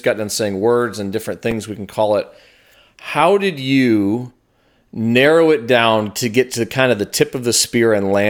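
A speech recording with one repeated buffer at 1.51 s. New audio arrived late, so the device replayed its last block once. The repeated piece is tiny, which fits a 5 ms buffer, so it comes across as a brief click rather than a stutter, and a few milliseconds of audio go missing.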